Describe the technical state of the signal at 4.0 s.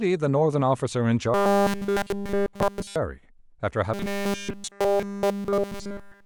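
Robotic sound from repeated short buffers runs from 3.94 s to 6.26 s, covering 4.0 s. The speech becomes a rigid, metallic buzz at 200 Hz, likely because essentially all audio there is a repeated 5 ms buffer while fresh audio is skipped.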